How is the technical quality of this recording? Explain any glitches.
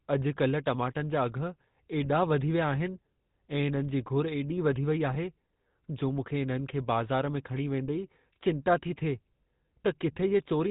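The recording has two problems. GSM full-rate coding runs through the whole clip, and two short bursts of GSM bit errors break it up.

The GSM full-rate codec colours the speech from start to finish. The sound fits the 13 kbps full-rate codec. That codec models the vocal tract and drives it with sparse, regular pulses. Nothing above 4 kHz survives. The result is a plainly audible buzzy, gravelly roughness.

GSM bit errors hit from 2.04 to 2.13 s, just before "वधी विया", and again from 5.08 to 5.17 s. Corrupted bits reached the decoder, which fits a bit-error rate of about 1%. Damaged filter, pitch or gain values then distorted a few consecutive frames. Each burst sounds like a brief squawk or gargling pop.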